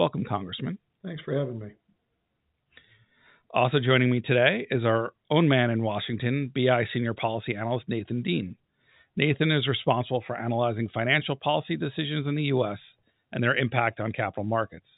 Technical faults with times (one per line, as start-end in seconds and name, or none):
none